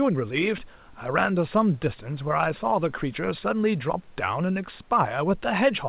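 No technical faults can be heard anywhere in the speech. The call path's band limit is audible, with nothing above 4 kHz, as expected from a narrowband codec such as G.711 A-law, and faint room noise sits about 38 dB below the speech.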